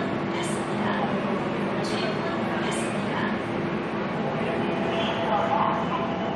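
No technical faults can be heard anywhere in this sound, so there is nothing to place in time order.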